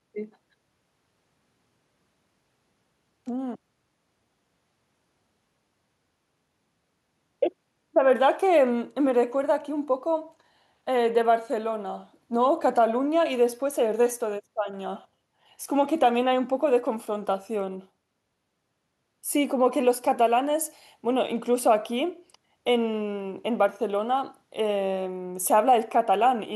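No technical faults can be heard in this recording.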